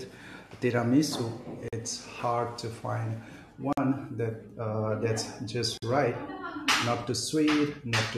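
At 1.68, 3.73 and 5.78 s the speech drops into silence, once every 2 seconds. Each is a gap at a join of encoded pieces, about 44 to 48 ms long. Separate encodes were joined untrimmed, so start delay and end padding remain. After "to find", the edges are smeared, then speech resumes.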